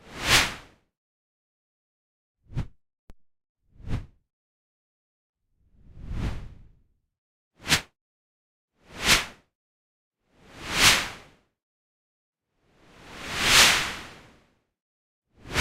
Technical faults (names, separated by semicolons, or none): DC step; corrupt frame decoded